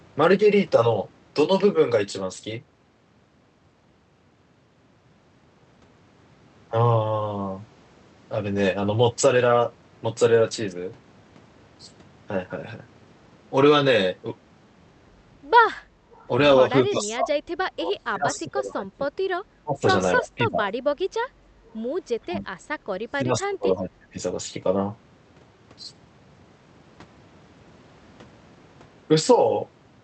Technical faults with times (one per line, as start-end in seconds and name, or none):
15.86-16.06 background gated by the echo canceller
16.12-16.28 echo leak
16.89-19.11 speech suppressed in double talk
19.64-20.62 speech suppressed in double talk
21.66-21.74 echo leak
22.17-22.48 speech suppressed in double talk
23.04-24.18 speech suppressed in double talk